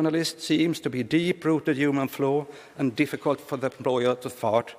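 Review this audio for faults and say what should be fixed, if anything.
Nothing stood out on listening, so there is nothing here that needs fixing.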